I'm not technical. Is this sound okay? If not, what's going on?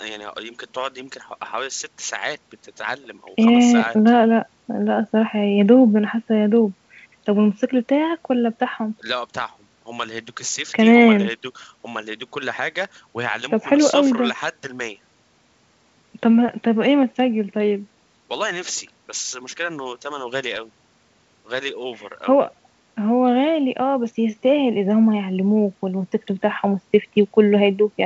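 Yes, this sound is okay, with nothing going wrong in it.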